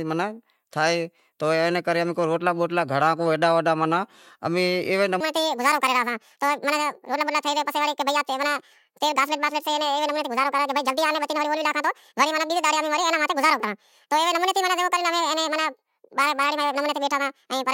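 A section at the wrong speed runs from 5.20 s to the end of this speech clip: playback jumps to 1.66 times normal, raising pitch by roughly ten semitones so the voice turns high and hurried, likely because that stretch was played against the wrong clock.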